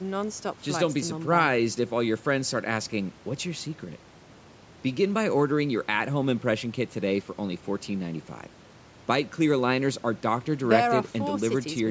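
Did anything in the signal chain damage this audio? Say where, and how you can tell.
No, nothing in the signal chain damaged this audio.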